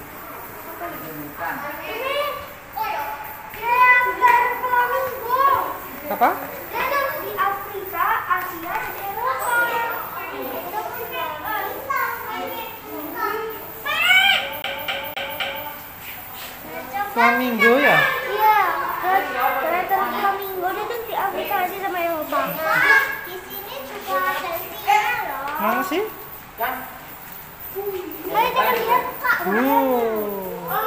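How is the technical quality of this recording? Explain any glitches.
The recording has one glitch. From 14.62 to 15.66 s, the CD gets stuck on one turn: a scratch throws the laser back, replaying a 0.26 s fragment four times as an even stutter with brief mutes.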